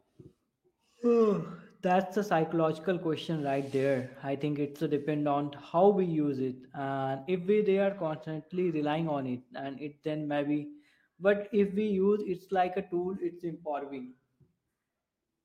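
No faults turn up anywhere in the recording: no dropouts, glitches, distortion or timing errors.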